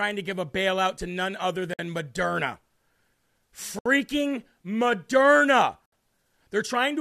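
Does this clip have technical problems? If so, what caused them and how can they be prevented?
Yes. A gap at a join of encoded pieces opens at 1.74 s, just after "bailout to none other", and again at 3.79 s and 5.86 s. These are dropouts of about 54 to 67 ms, spaced 2 s apart, where separately encoded segments were concatenated with their encoder delay and final-frame padding left in. To prevent this, encode the audio as one continuous stream, or trim each segment's delay and padding using gapless metadata before joining.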